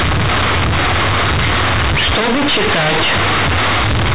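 A speech clip with companded audio read as linear throughout. The A-law telephone bytes are played as plain 8-bit samples, never expanded. Every sign change swings the output across half its range. Quiet passages blare like loud ones, giving harsh, buzzy distortion and heavy noise in pauses.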